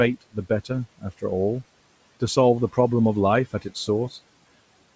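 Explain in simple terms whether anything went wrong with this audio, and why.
Between 0.21 and 0.7 s, the noise suppressor briefly mistakes bits of speech for background noise and turns them down, adding up to about a tenth of a second. That's speech cut by the noise suppressor, and those moments sound swallowed or oddly faint.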